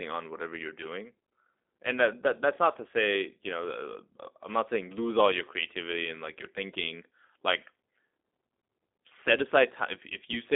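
Throughout, the speech has been squeezed through a G.729 codec, which points to G.729A at 8 kbit/s rebuilding each frame from a vocal tract model and a few pulses. It sounds plainly rough and synthetic, confined to 250 Hz–3.6 kHz, with nothing above 3.7 kHz.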